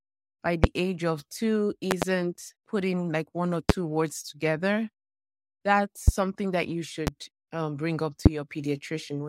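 A sudden voltage step, likely from a switch, plug, static or driver glitch, repeatedly lands on the signal, and each time the speech carries on underneath a loud pop. Single pops occur at 0.64–0.67, 3.70–3.72 and 6.08–6.11 s just before "that you", at 7.07–7.10 s between "that you" and "um bring up", and at 8.26–8.29 s after "um bring up". A double pop falls at 1.91–2.05 s. Most peak about 25 dB above the speech; the 7.07 s pop is about 20 dB.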